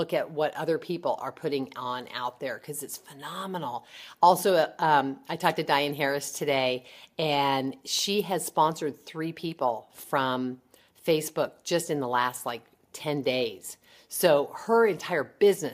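No technical faults are audible.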